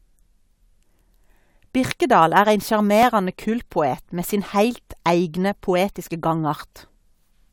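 Speech with a regular click about every 1.88 s from 1.14 s to 6.80 s, four in all: clock drift buffer slips, likely from two mismatched device clocks dropping or repeating small sample blocks.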